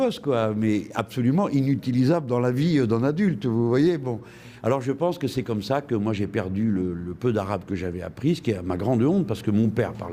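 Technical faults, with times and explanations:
No technical faults can be heard anywhere in the recording, and the signal holds together as one continuous, unbroken stream.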